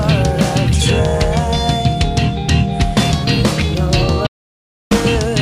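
At 4.27 s the sound drops out cold and stays that way until about 4.91 s, roughly 640 ms of silence with no room tone underneath. That's an audio dropout to silence, likely from the input going away for a moment, a loose connection, a link hiccup or a stray mute, while the recorder kept writing silence. It cuts off mid-flow and snaps back in, and whatever happened in that gap is simply gone.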